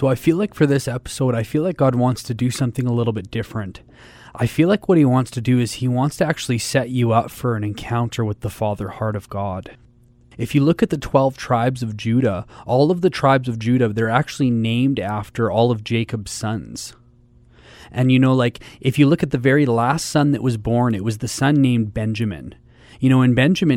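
Nothing stood out as a technical fault on listening to this speech recording.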